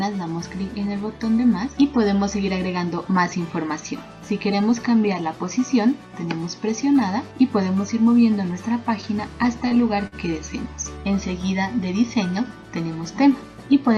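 At 9.68 s, and again at 10.07 s, the audio shows a short stall from a late packet. In each case the next packet had not arrived on time, so the jitter buffer drained and the receiver held the last sound in place. It filled about 24 ms in the first stall and about 50 ms in the second. Playback then resumed exactly where it left off, with nothing lost, though the output now runs that much later. Each stall sounds like a brief sustain, with a faint buzz or dip.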